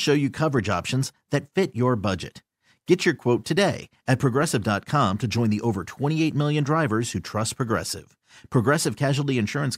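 No technical faults are audible anywhere in this speech.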